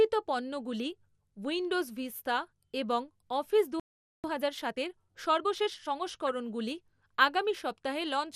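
Throughout, the speech likely went through MP2 compression with too few bits to go around, which fits a low-rate encode near 80 kbps. Upper sub-bands drop out and flicker while the remaining ones are coarsely quantised, so the sound is plainly dull, gurgling and granular from start to finish.

At 3.80 s the player's supply of data most likely ran dry or its thread was held up, causing a playback stall. The speech cuts off abruptly in mid-flow and stays silent for about 0.44 s before resuming at 4.24 s.

From 4.24 s to 6.0 s the player works off its backlog with a time-compressed catch-up, trimming and cross-fading small slices of audio to run at 1.25 times normal speed. The speech sounds hurried but keeps its pitch.

At 6.27 to 6.29 s there is DAB burbling: bit errors slipped past error correction into the MP2 data, corrupting samples across what sounds like a couple of frames. Short blips of noise appear in single sub-bands, producing a brief burble.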